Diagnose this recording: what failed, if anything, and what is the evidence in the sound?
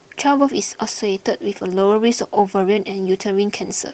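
The failure is at the codec stage: Opus voice compression, audible across the whole clip. The speech keeps its full bandwidth but has a hoarse, slightly robotic texture throughout, the sign of a coarsely coded excitation. The sound points to hybrid operation at roughly 16 kbps. In this mode the linear-prediction coder handles the band below 8 kHz and a transform layer fills in the top, so at this rate both parts run short of bits and the damage is plainly audible.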